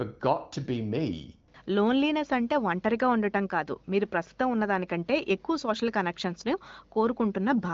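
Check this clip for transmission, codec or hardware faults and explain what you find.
No transmission, codec or hardware faults can be heard in this speech. It carries the bandwidth of AMR wideband (HD Voice) coding, with nothing above about 7.3 kHz, and the absence of roughness points to one of the higher rates, around 18 kbit/s.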